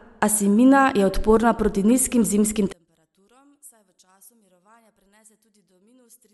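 A speech recording in which, from 2.73 s to the end, right after "odporna proti nizkim zimskim", the speech abruptly collapses to a faint residue, dropping by about 35 dB, with the centred speech and low end all but gone. The likely cause is one channel inverted: with one stereo side in reversed polarity, the near-identical content in both channels cancels when summed to mono, leaving only the small difference between them.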